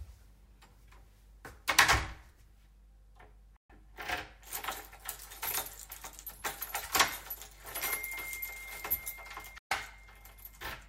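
At 3.56 s the sound cuts out in a digital broadcast dropout, fading to silence in about 3 ms and staying silent until 3.70 s. The same hole, about 128 ms long, recurs at 9.58 to 9.72 s. The receiver muted when frames failed to arrive or decode, which points to roughly four frames lost. Unlike network concealment, nothing is repeated or smeared to fill the gap, and the brief fade avoids the sharp click of a loose connection.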